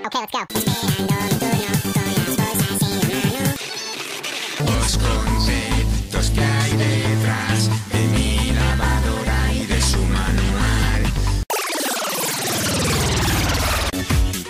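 From 0 to 4.75 s the audio was read two samples at a time. The reader treated each pair of samples as one frame. The sound runs at double speed and twelve semitones higher, a full octave.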